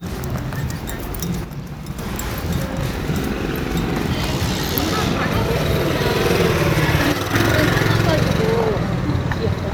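From 1.44 to 1.99 s, and again from 7.12 to 7.33 s, the sound abruptly drops by about 6 dB and then snaps back to full level. Each drop is most likely one channel dropping out before the stereo pair is summed to mono, so only half the shared signal reaches the output. On a waveform, both stretches appear as flat-edged steps to roughly half amplitude. A spectrogram shows the same steps as uniform dimming across all frequencies, with sharp vertical edges.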